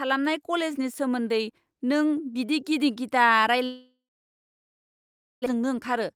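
A speech clip in which the stream from the sender likely stopped arriving for a long stretch, a long network dropout running from 3.65 s to 5.48 s. With no packets to decode, the receiver padded about 1.8 s: it first stretched the last sound into a brief fading buzz, then left about 1.45 s of silence. Around 0.96 s of the original speech was never played, so the talk resumes at 5.48 s with a piece missing, and playback now runs roughly 0.7 s later than before. The extra backlog then triggers a jitter buffer speed-up from 5.56 s to the end at 6.15 s. The receiver trims tiny pitch-period slices repeatedly, dropping a few tens of milliseconds in total, so this closing stretch plays at about 106% speed. The pitch stays the same, but the delivery sounds slightly hurried.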